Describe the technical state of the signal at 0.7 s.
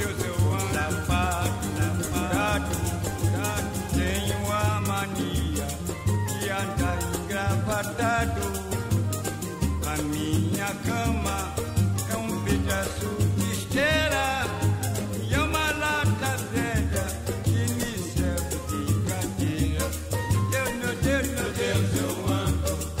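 At 0.7 s a doubled audio track is in progress: the same sound has likely been mixed in twice, with a second capture path running about a second behind the first. The lagging copy is full-band and somewhat quieter, around 5 dB down. It carries no decay or room colour, so it sounds like a dry, overlapping repeat. The doubling is already under way when the clip begins and cuts off abruptly at 4.66 s.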